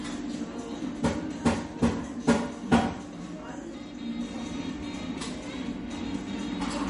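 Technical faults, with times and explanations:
Throughout, MP3 compression: the audio has no content above 10.6 kHz, and the treble is cut off abruptly rather than rolling off gently. The remaining detail sounds plainly watery and swirly, with faint components flickering in and out. That flicker separates it from a simple low-pass filter, which would dull the top without the swirl. The likely cause is an MP3 encoder short of bits, consistent with a low rate around 40 kbps.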